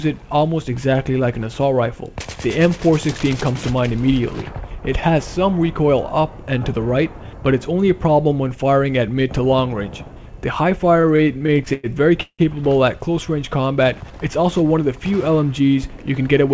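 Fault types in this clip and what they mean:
Repeated stalls (stutter): From 10.94 to 11.87 s the sound keeps catching and dragging. Packets arrived late again and again, the jitter buffer drained fourteen times, and each gap, up to 103 ms, was padded with stretched-out sound. That adds about 267 ms, with nothing lost.
Call audio freeze: At 12.23 s the sound hangs for about 161 ms. The last bit is held over, then fades to roughly 80 ms of silence before it carries on from where it stopped. The likely cause is packets held up long enough to empty the jitter buffer.
Jitter buffer speed-up: Between 15.60 and 16.50 s the audio runs at about 109% speed with the pitch unchanged, so it sounds a bit rushed. The buffer had built up extra delay, so the receiver trimmed tiny pitch-period slices, around 70 ms in total.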